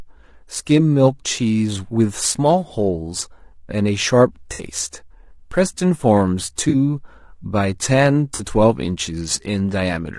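Speech runs through the whole clip with a rough, grainy texture. Noise fills the gaps between the voice's harmonics, and the top band sounds thin and synthetic. This is plainly audible from start to finish. The likely cause is low-delay AAC compression, the AAC-ELD type used on video calls. Its short frames resolve pitch harmonics poorly, and at a rate that fits roughly 32 kbps there are too few bits to keep the voice clean. Three brief patches show AAC frame loss with concealment. The first runs from 4.53 to 4.63 s and lasts about 60 ms, which fits three lost frames. The second runs from 6.69 to 6.75 s, and the third from 8.35 to 8.41 s. Each of these lasts about 40 ms. In each gap the decoder rebuilds sound from the last good spectrum, so the speech turns briefly smeared, noisy or phasey.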